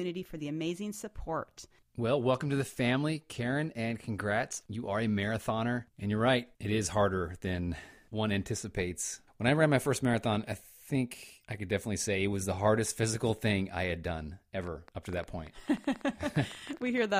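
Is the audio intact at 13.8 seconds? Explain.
Yes, the audio is intact at 13.8 seconds, with no dropout, click, distortion or other fault at that moment.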